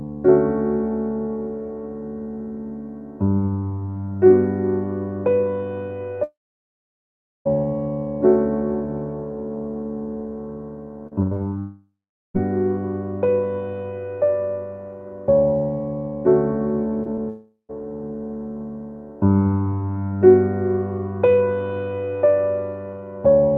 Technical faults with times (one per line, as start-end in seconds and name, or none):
6.23-7.47 long network dropout
11.07-11.53 repeated packet loss (robotic sound)
11.59-12.36 long network dropout
17.03-17.19 short concealed packet loss
17.29-17.71 long network dropout